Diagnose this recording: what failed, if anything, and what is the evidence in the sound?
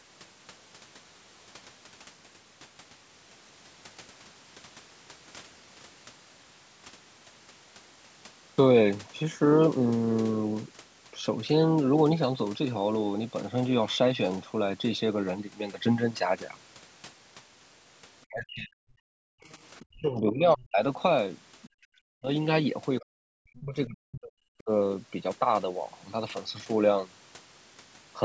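Call processing stage, echo canceller: speech suppressed in double talk. The speech drops by up to about 40 dB at 18.26–18.92, 19.37–19.42, 19.9–20.83, 22.0–22.29 and 23.01–24.7 s. It likely failed to separate the near talker from loudspeaker echo and attenuated both.

Same stage: the other side's voice leaking through. Faint scraps of a second voice, roughly 30 dB below the speech, appear at 19.76–19.86 and 21.62–21.69 s, between the suppressed stretches. Residual loudspeaker echo was likely left in the microphone signal by incomplete cancellation.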